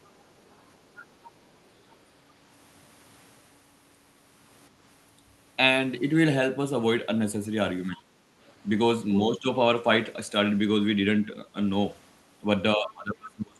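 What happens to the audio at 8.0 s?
Right around there, from 7.89 to 8.04 s, the speech briefly sinks, dipping by roughly 15 dB at its lowest for about 150 ms before coming back up. That's the classic sound of speech suppressed in double talk. The likely story is that both ends were talking at once, so the echo canceller couldn't tell this talker apart from the loudspeaker echo and pulled the level down on everything for that moment.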